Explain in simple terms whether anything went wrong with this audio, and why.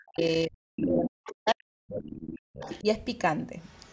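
Speech suppressed in double talk runs from the start to about 2.86 s. For roughly two seconds of that stretch, the talker's speech sinks sharply, at its worst almost to nothing. This is likely an echo canceller confused by both people talking at once. It couldn't tell the talker's speech apart from the loudspeaker echo, so it turned everything down together, cutting into the speech it was meant to keep.

The other side's voice leaking through appears at 0.25 to 0.37 s, 0.83 to 1.52 s, 1.88 to 2.19 s, 2.59 to 2.81 s, and 3.63 s to the end. The likely cause is that the device played the far caller on its loudspeaker and the echo canceller didn't fully remove that sound from the microphone. The stretch around 0.83 to 1.52 s is the most noticeable. The first and last scraps are very faint.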